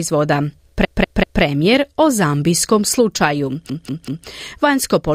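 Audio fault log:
0.85–1.42 s and 3.70–4.27 s, repeated frames: the speech stutters, with the same 192 ms snippet played four times in a row, once just before "o zambijskom slučaju" and again just after it. A block of compressed frames, which fits a run of about six frames, was sent or written more than once. The decoder plays that block three extra times, so each stutter lengthens the audio by 576 ms.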